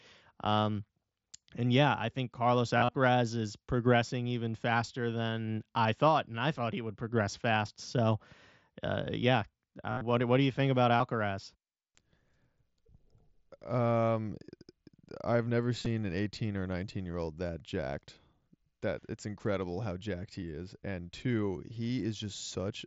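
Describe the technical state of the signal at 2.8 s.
At 2.8 s there is concealed Bluetooth headset packet loss, spanning 2.78 to 2.95 s, just before "is progressing even faster". Roughly 98 ms of audio goes missing across that 165 ms stretch, with the longest run 37.5 ms. The receiver fills each gap by repeating the best-matching recent waveform cycle, so the sound turns briefly buzzy at steady level, then warbles as real audio resumes. A spectrogram shows evenly repeated harmonic stripes, and the waveform shows flat-envelope copied cycles.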